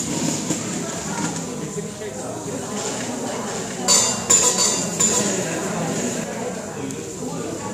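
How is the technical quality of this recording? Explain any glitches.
The recording has one glitch, a doubled audio track. From 2.46 s to 6.24 s, a second copy of the same sound runs roughly 0.7 s behind the original, about 5 dB quieter. The likely cause is the signal being captured a second time through a slower path, or an edit leaving two copies out of step. The late copy is full-band, with no decay or room colouring, so it reads as a flat repeat rather than an echo, and it starts and stops abruptly at those times.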